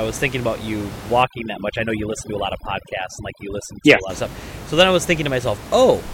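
From 1.23 to 4.10 s, a noise reduction stage is working far too aggressively, which is overdone noise removal. It pushes individual frequency bands down to almost nothing wherever they sit close to its picture of the noise. The room noise, about 13 dB below the speech elsewhere, collapses into near silence scattered with twinkling specks. The softer parts of the speech are cut along with it.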